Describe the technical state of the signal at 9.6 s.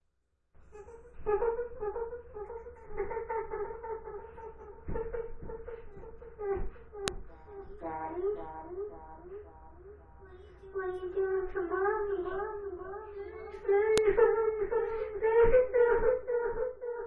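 At 9.6 s the signal is intact, with no dropout, distortion or other fault to be heard.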